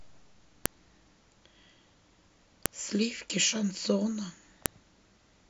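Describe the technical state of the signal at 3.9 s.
At 3.9 s the speech signal is intact, with no audible technical fault at that moment.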